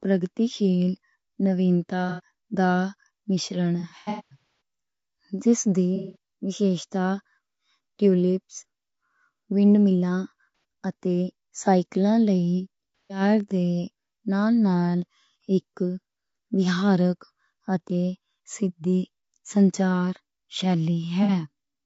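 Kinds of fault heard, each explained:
Low-delay AAC compression: present throughout the whole clip, this is the likely source of the rough, grainy texture in the speech. It codes about 500 frequency lines a frame with a low-delay window, and at what sounds like a bitrate around 32 kbps the gaps between harmonics fill with noise and the upper band turns dull and synthetic. The damage is plainly audible rather than subtle.
AAC frame loss with concealment: at 2.09 to 2.20 s, 3.80 to 4.37 s, 5.96 to 6.16 s just after "جس دی", 10.55 to 10.64 s just before "اتے سائکل", 13.03 to 13.21 s, and 21.23 to 21.32 s, blocks of audio went missing and the decoder filled them from the last good spectrum. The short gaps of 60 to 180 ms come out as smeared, noisy or phasey patches. Around 3.8 s, about 510 ms of losses are scattered across 810 ms, the longest run roughly 200 ms, so the sound there repeatedly blurs.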